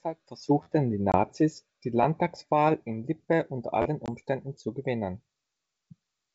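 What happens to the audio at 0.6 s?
A repeated buffer occurs from 0.63 to 0.66 s. Audio arrived late, so the last piece of roughly 12 ms, which fits a 512-sample buffer, played three extra times, heard as a brief buzzy stutter. The waveform shows identical repeating blocks, and the spectrogram shows vertical lines at each hard join.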